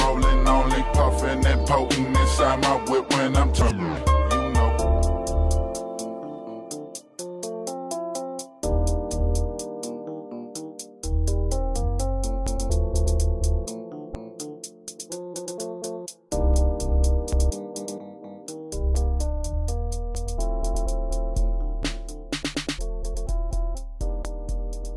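No faults detected anywhere in the recording.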